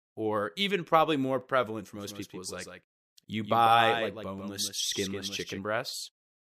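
Doubled audio track, 1.97 to 5.59 s, after "probably more prevalent for": a dry copy, likely from a slower second capture, trails about 150 ms behind, a few decibels quieter, starting and stopping abruptly.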